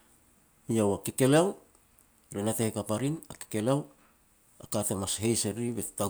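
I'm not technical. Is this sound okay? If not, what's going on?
No. There are clock drift buffer slips from about 1.10 s to 5.69 s: a click roughly every 1.5 seconds in the speech, about four in all. The likely cause is two pieces of equipment each keeping their own time, off by a tiny amount, around 200 parts per million. The holding area between them slowly drifts out of step until about 15 samples get dropped or repeated, and each of those jumps is a click.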